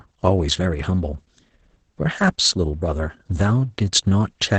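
From start to end the speech carries Opus voice compression damage, and it is heavy. The coder is running SILK linear prediction in wideband mode, so the spectrum stops abruptly near 8.9 kHz, leaving a flat dark ceiling on a spectrogram. With the excitation coded this coarsely, the voice sounds muffled, hoarse and faintly robotic, which points to a rate around 10 kbps. The harmonics look smeared rather than crisp, and the texture fits 20 ms coding frames.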